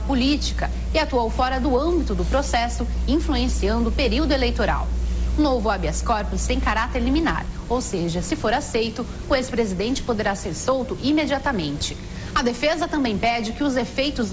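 Nothing goes wrong anywhere in this clip, so there's no fault to walk through at any point.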